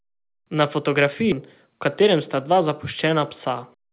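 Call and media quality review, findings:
Skip ahead at 1.32–1.34 s in the speech. Playback jumps forward with no gap. Roughly 0.7 s of audio is missing, and the two sides are butted together. Probable component: jitter buffer. Likely cause: overflow, with queued packets discarded and playout latency cut by about the same amount. Call path audible as band-limited audio, nothing above 4 kHz, fitting G.711 A-law at 64 kbps.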